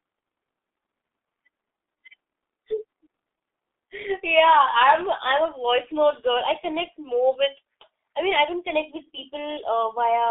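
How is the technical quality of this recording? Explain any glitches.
Pretty rough: the speech has been through the G.723.1 codec for the whole clip. Everything sits in a narrow 250 Hz to 3.6 kHz phone band, and the sound, which fits roughly 6.3 kbit/s, is heavily damaged. The coder models the voice in slow 30 ms frames, so it comes out muffled and hoarse, with smeared consonants.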